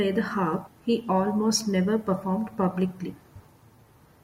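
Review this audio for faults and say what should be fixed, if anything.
Compressed frames skipped at 0.66 s, just after "the harp" and before "he almost never performed", and again at 3.35 s. In both places the speech leaps forward, losing roughly 150 ms and then about 70 ms, jumps that point to runs of around seven and three frames of about 21 ms each. Verify file integrity after encoding and transfer, and add error protection so damaged frames are recovered, not dropped.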